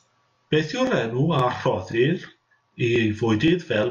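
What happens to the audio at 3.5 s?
Overlapping chunks, from 3.48 to 3.50 s. The speech is being handled in 0.5-second blocks, and at this join the new block begins before the previous one has finished. A sliver of about 21 ms is therefore played twice in quick succession. That brief repetition lands as a click or stutter right at the boundary, a momentary hiccup in the flow of the speech before it carries on into the next block.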